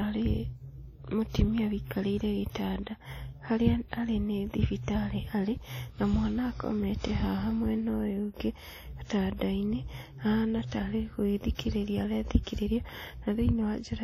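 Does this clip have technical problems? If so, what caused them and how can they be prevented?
Yes. The speech has heavy transform-codec damage throughout, likely from WMA compression at a low rate, with sound pointing to around 32 kbps. Long blocks smear quantisation noise into a washy, ringing hiss that swells with the signal, and nothing survives above 17 kHz. Encoding at a higher bitrate, or keeping a lossless master, would prevent this.

There is pre-echo at 11.55 s, just after "ahana ta arĩ", spreading about 41 ms, and at 12.43 s, spreading about 37 ms. Each sharp onset falls late in a block, so noise sized for the loud part leaks into the quiet gap before it as a brief hiss that softens the attack. An encoder with block switching to short windows on transients would avoid it.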